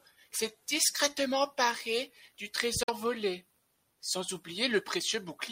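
At 2.83 s, packets of the wireless stream likely failed to reach the headphones in time and were discarded: a Bluetooth dropout. The output goes silent right after "s'est discrètement emparé du" and stays empty until 2.90 s. About 46 ms of material is missing, which fits two lost frames. When sound returns at "volé sans", it picks up further along, as though it had kept playing through the hole, rather than resuming where it stopped.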